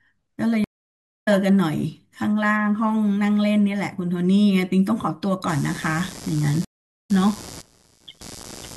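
At 0.64 s a stream reconnect occurs: the connection drops and a fresh decoder restarts mid-stream, leaving 0.62 s of silence before the speech resumes about half a second further on. From 5.48 s to the end, computer activity noise from processor or graphics load disturbing the shared audio ground adds a buzz pulsing around 100 times a second, about 20 dB below the speech. A second reconnect at 6.65 s gives 0.44 s of silence and a jump of roughly 0.3 s.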